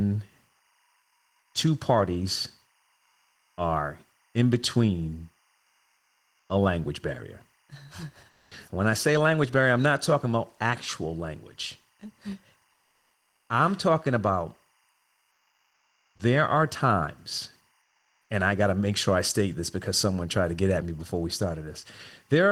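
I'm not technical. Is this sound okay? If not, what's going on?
No. Timecode bleed runs through the whole clip: a faint, steady chirping warble sits behind the speech. Linear timecode, a timing signal that flips between two pitches near 1 and 2 kHz, has leaked in from a neighbouring track or cable.

Comfort noise in place of the background appears at 8.29 to 8.47 s, 14.95 to 16.15 s and 17.83 to 18.19 s. In these pauses the real room sound is swapped for a flat, slightly quieter hiss. The likely cause is the sending system pausing transmission during silence, so the receiving end fills the gap with synthetic noise.

An onset clipped by the voice detector occurs at 16.12 to 16.15 s, where the speech returns with an abrupt start. The sender was likely slow to notice the sound resuming, so those first moments were never sent.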